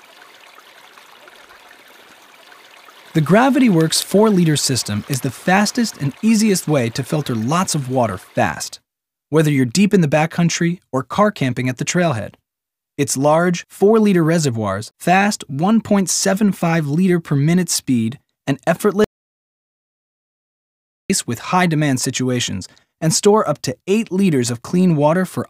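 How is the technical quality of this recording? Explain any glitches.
The recording has one clear glitch. From 19.04 s to 21.10 s the sound cuts out abruptly to silence, with no room tone, for about 2.05 s, then resumes mid-flow. This audio dropout to silence most likely comes from the input being lost while the recorder kept writing silence, so that stretch is gone.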